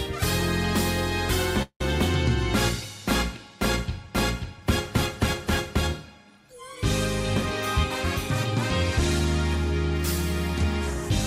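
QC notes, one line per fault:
1.62–1.81 s, call audio freeze. The sound stalls and its last moment is stretched into a fading tail, ending in about 70 ms of silence. Nothing is lost. Playback resumes where it stopped, now 179 ms late. The likely cause is delayed packets emptying the jitter buffer.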